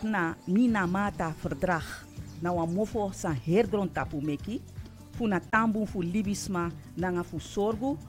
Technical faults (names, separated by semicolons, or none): corrupt frame muted